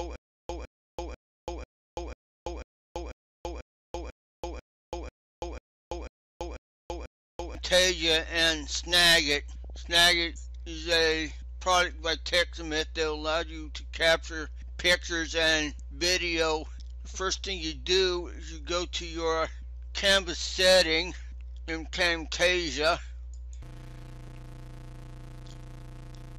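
MP2 compression is heard throughout the 26-second clip: the top end sounds dull, upper bands flicker in and out, and a gurgling, granular roughness sits on what remains. The likely cause is MPEG Layer II coding that is starved of bits, which fits a rate of about 80 kbps, so whole high sub-bands are dropped and the rest coarsely quantised.

Stutter with silent gaps is already under way at 0.0 s and lasts until 7.55 s. A 158 ms burst repeats 15 times, once every 493 ms, each time followed by 335 ms of dead silence. This is likely a stalled stream replaying its last fragment on each retry and then running empty, so the audio for that stretch is lost.

DAB burbling appears from 9.64 to 9.96 s as a brief burst of burbling over the sound. Bit errors at a low rate got past error correction into the MP2 data: corrupted samples put short blips of noise into single sub-bands. This fits about a dozen frames being hit.

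Block size mismatch (padded) runs from 23.62 s to the end. A 91.9 Hz buzz appears, and the audio slows to 0.533 times normal speed while keeping roughly its pitch. Each block, which fits 256 written samples, is read into a larger one whose remainder is filled with zeros, so a short gap is inserted at every block.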